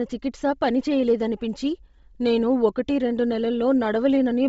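Throughout the speech, nothing reaches above 7.7 kHz, and the upper band carries a breathy, grainy hiss in place of clean detail. This heavy damage is likely from Bluetooth LC3 compression at a low bitrate near 24 kbps. Unlike a plain low-pass, the top is filled with noise, not simply missing.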